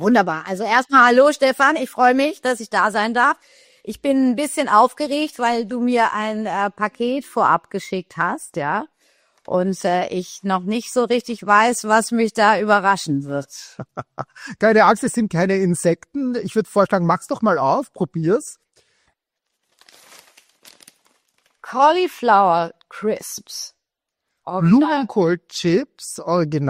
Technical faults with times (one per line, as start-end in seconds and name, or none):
none